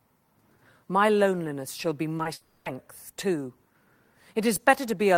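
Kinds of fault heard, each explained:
Short concealed packet loss: Two brief bursts of call audio, about 20 ms each, arrived too late for the decoder, which filled each gap by extending the preceding sound. Around 2.17 s and 2.23 s, this leaves two quick smears or wobbles in the speech.
Long network dropout: A run of audio from about 2.33 s to 2.67 s was likely lost in transit. The gap, about 320 ms, is filled entirely with a continuation of the preceding sound that buzzes or hisses and fades, with no silence before speech resumes.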